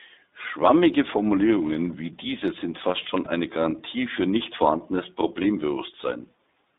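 This speech clip has been through the iLBC codec the whole way, and you can hear it: the audio sits in a narrow telephone band of roughly 200 Hz to 3.7 kHz, with nothing up top, and the damage is plainly audible as a slightly rough, synthetic edge. That fits iLBC's 15.2 kbps mode with 20 ms frames, where each frame's excitation is coded on its own, trading some naturalness for robustness. There are also two lost iLBC frames, at 3.24 to 3.28 s and again at 5.42 to 5.47 s. Each dropout is short enough to suggest a single missing 20 ms frame. In both spots the decoder papers over the hole by repeating the last pitch cycle with some noise mixed in, so you get a brief held, faintly buzzy vowel-like smear instead of silence. Since iLBC frames don't depend on the previous one, the speech snaps straight back to normal right after each gap.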